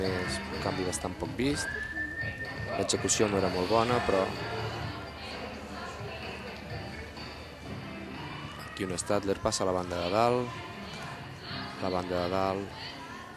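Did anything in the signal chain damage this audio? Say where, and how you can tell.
No, nothing in the signal chain damaged this audio.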